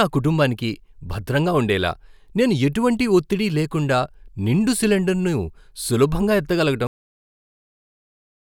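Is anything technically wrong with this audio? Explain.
Yes. At 6.87 s the speech has a cut-off end: the final buffers were never written, so sound stops mid-utterance and drops straight to digital silence without decay.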